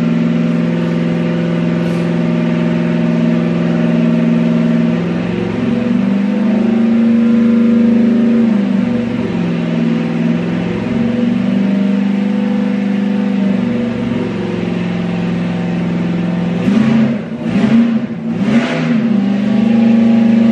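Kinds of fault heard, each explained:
No faults turn up anywhere in this one, so there's nothing to list.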